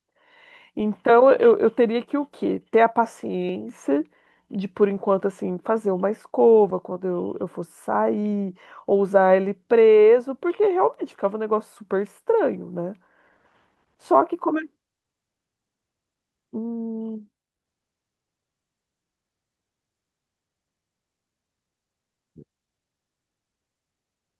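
Speech recording with no audible technical faults at any point.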